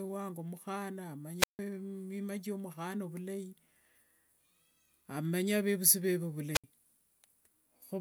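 This speech clip carries two wireless microphone squelch dropouts. The first runs from 1.38 to 1.59 s, just before "mima kiomukhana vulai". The second runs from 6.53 to 6.64 s. In each, hiss swells briefly as the radio link weakens. The receiver's squelch then mutes the output, leaving near silence. The hole lasts about 154 ms in the first event and 69 ms in the second. The speech comes back right after each gap.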